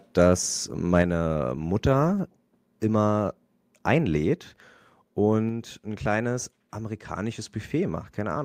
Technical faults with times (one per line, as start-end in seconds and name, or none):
0.94-1.02 microphone overload
1.02 microphone volume stepped down